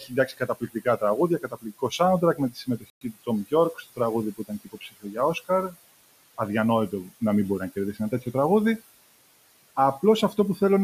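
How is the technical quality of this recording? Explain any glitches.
The recording has three audible problems: constant noise-suppression processing, repeated clipping of the speech by that processor, and one brief dropout.

Noise suppressor artifacts run through the whole clip. The suppressor pulls down the bands it judges to be steady noise by about 19 dB, frame by frame. The room noise, about 18 dB under the speech, therefore dips between phrases and swells back beneath them.

Speech cut by the noise suppressor occurs at 0.0–1.03 s, 1.39–2.0 s, 2.21–3.28 s, 3.73–3.99 s, 4.37–5.16 s and 7.93–8.34 s. The processor mistook parts of the speech for noise and turned them down with the background, by about 12 to 21 dB at the worst points. Syllables sound swallowed or faint.

A Bluetooth stall is the likely cause of the silent gap from 2.9 to 3.01 s. The sound cuts out for 113 ms and then resumes. 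This fits a wireless headphone buffer running empty while delayed packets were resent.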